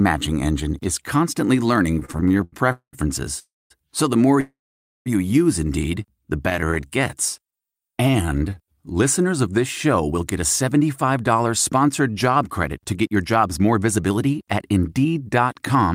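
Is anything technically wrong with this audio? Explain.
Yes. The speech has network playout faults. It stutters, freezes, slows down and then speeds up.

Repeated stalls (stutter) occur from 1.91 to 2.54 s and from 6.50 to 6.85 s. Audio arrived more slowly than it played, so the receiver's buffer kept running dry. The receiver bridged each gap by extending the last sound. The first burst has 14 gaps, adding 248 ms, with the longest gap 82 ms. That is 39% of the span. The second has 8 short gaps totalling 96 ms. The speech drags and judders. Nothing is lost.

Call audio freezes occur at 2.72–2.95 s, 3.39–3.72 s and 4.40–5.08 s. The sound holds as a fading buzz and then drops to quiet. These events fill 207 ms, 314 ms and 656 ms. The silent parts last 100 ms, 220 ms and 510 ms. Speech then resumes where it stopped, with nothing missing. The likely cause is packets held up in transit, which emptied the jitter buffer. 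Each freeze inserts a pause, so everything after it plays later.

A jitter buffer slow-down runs from 6.65 to 8.75 s. The buffer was low, so the receiver built up a reserve. It did this by repeating tiny pitch-period slices many times. This added 249 ms. The speech plays at about 89% speed. Pitch stays the same, but sounds are stretched and lazy.

A jitter buffer speed-up runs from 10.11 s to the end. The buffer held too much audio. The receiver trimmed short pitch-period pieces repeatedly to cut the delay, removing roughly half a second in total. The speech runs at about 109% speed at unchanged pitch. It sounds hurried.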